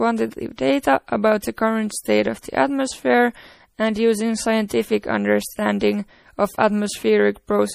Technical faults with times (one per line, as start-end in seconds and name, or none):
0.00-7.75 MP3 compression
1.42 pre-echo